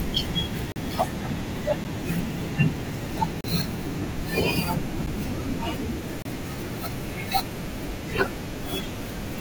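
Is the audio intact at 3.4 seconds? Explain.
No. From 3.41 to 3.44 s there is a block of digital silence: about 33 ms of silence. The speech drops straight to nothing and resumes with no fade in or out, so each edge is an abrupt step in the waveform. At this length the gap is heard as a brief hole in the speech.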